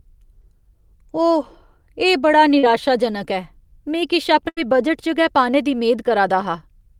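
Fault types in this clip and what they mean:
Short concealed packet loss: Brief smears or wobbles at about 0.41 s and again at 2.59 s, the second longer, where the speech momentarily blurs before blending back. About 20 ms and then about 40 ms of audio never arrived in time, and the receiver papered over each hole by extending the sound just before it, then crossfading into the real signal once packets resumed.
Burst of packet loss: From about 4.49 to 4.59 s the speech briefly freezes into a held, fading tone or hiss before jumping ahead, with roughly 80 ms of the talker's audio simply gone. Several consecutive packets were lost or arrived too late to play, so the receiver kept repeating and attenuating the last sound it had until real audio came back, skipping over the missing stretch.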